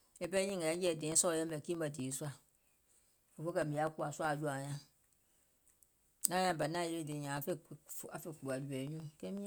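A steady train of small ticks runs through the speech from 0.12 s to 9.37 s, eight per second, audible only while sound is present. These are periodic USB or driver dropouts: every 0.125 s something stalls the audio path, and about half a millisecond of signal is replaced by silence.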